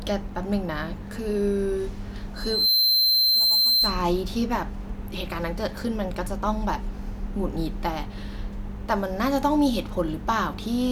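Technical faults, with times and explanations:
2.35 to 4.04 s, loudspeaker feedback squeal: a single piercing tone at 4.1 kHz swells up over roughly a third of a second and then sits a few decibels above the speech until it stops at 4.04 s. The microphone was picking up the loudspeaker it was feeding, and at that one frequency the round trip gave back more than it took in, so the tone fed itself and kept climbing.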